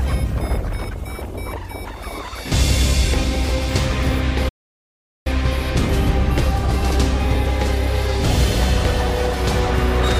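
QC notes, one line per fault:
4.48–5.27 s, playback stall: the sound cuts out mid-flow and sits silent for about 0.77 s before carrying on. The likely cause is the player running dry of data or its thread getting blocked, so output simply stops until it catches up.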